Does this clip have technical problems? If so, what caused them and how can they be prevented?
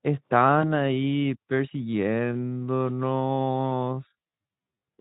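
Yes. From 0.62 to 0.67 s the sound briefly fades, with a short weak tail: VoIP packet loss concealed by the speech codec, with one 20 ms frame lost and filled by extrapolation. A jitter buffer with forward error correction or redundant packets would prevent this.

From 2.01 s to the end the pace abruptly slows to about 0.56 times speed at unchanged pitch, likely a time-stretched section. Leaving the timing untouched, or using a higher-quality stretching algorithm, would avoid it.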